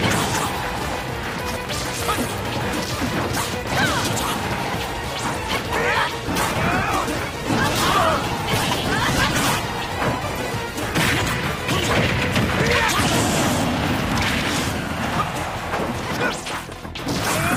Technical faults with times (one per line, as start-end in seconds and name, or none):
6.27-14.07 call bitrate drop